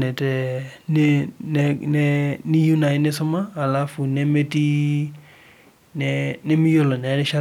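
Speech recording with no technical faults heard anywhere in the clip.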